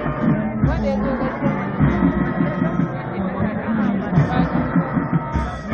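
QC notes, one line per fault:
4.10 s, damaged data in a compressed stream: a quick squawk-like blip where a stretch of the coded data is corrupted. The decoder can't make sense of those frames, loses sync and hunts for the next valid header, so you get that brief chirp.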